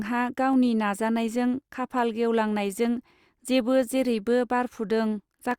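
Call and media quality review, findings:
Regular clicks every 1.24 s, 0.53 to 5.51 s, five or so. Likely clock drift buffer slips: clocks roughly 150 ppm apart, a few samples dropped or repeated.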